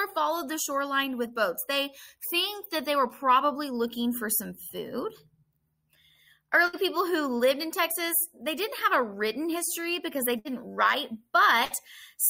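Bursts of packet loss hit at 6.67–6.76, 10.39–10.48 and 11.65–11.73 s. Each time, about 60 ms goes missing. A fading held sound fills the gap.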